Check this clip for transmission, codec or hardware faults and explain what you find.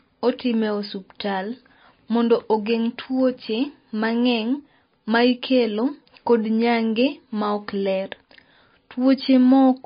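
One codec fault runs through the whole clip. The speech was likely squeezed through MP3 compression at a low bitrate, which fits something around 26 kbps. Starved of bits, the encoder cuts the treble outright, so nothing survives above 5 kHz, and it drops quieter frequency lines that then flicker in and out between frames. The damage is plainly audible: a dull, band-limited sound with a watery, swirling texture, metallic chirps on s sounds, and softened, smeared attacks.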